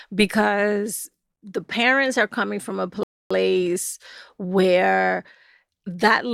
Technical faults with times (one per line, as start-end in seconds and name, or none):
3.03-3.31 rebuffering stall